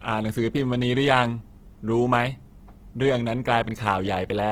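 Opus compression runs through the whole clip: the speech sounds grainy and rough, with a noisy, sandpapery texture in place of clean harmonics, which is plainly audible. The likely cause is Opus coding in its music (CELT) mode at a low rate, consistent with about 16 kbps. Each band's energy is preserved, but starved bands are filled with folded copies or noise, so the spectrum stays full, reaching 20.2 kHz, while its fine detail turns coarse.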